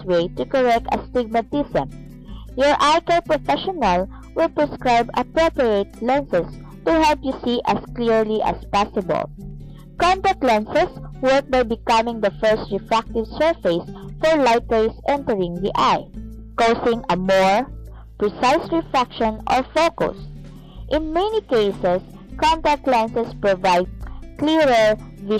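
Nothing in the audio stood out as a technical problem on listening.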